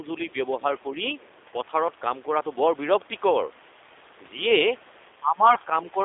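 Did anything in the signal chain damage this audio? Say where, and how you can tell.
Yes. Throughout, the speech is rough and slightly synthetic, confined to about 300 Hz to 3.6 kHz: G.729 codec damage at 8 kbit/s.

At 5.55 to 5.57 s the speech is briefly stretched and weak, consistent with a single lost 10 ms frame. This is VoIP packet loss concealed by the speech codec, which rebuilt the gap from the preceding pitch and filter.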